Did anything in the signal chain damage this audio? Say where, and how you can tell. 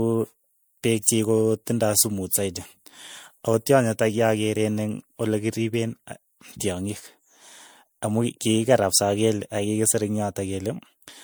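Yes, at the codec stage: generation loss runs through the whole speech clip, with swirly, hollow smearing and blurred consonant onsets despite content reaching 20.1 kHz. That is likely from repeated MP3 re-encoding, perhaps five passes near 96 kbit/s, because a single encode at that bandwidth wouldn't sound this damaged.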